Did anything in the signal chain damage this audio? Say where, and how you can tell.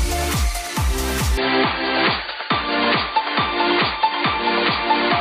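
Yes. From 1.38 s to the end the sound abruptly turns dull and boxy, with no gap and roughly no level jump, most likely an input switched to a poorer device at the driver stage. A spectrogram shows content stopping sharply at 4.7 kHz from there, over a faint new noise floor about 40 dB down.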